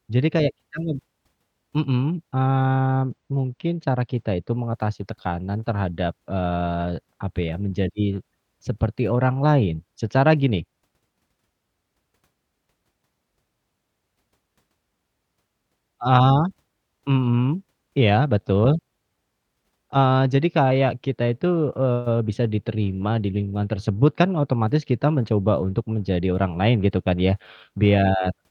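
From 2.68 to 4.54 s, before "mengatasi tekanan terhadap", channel delay (comb filtering) dulls the speech. A roughly two-sample lag notches near 10 kHz instead of rolling off smoothly like low-pass filtering.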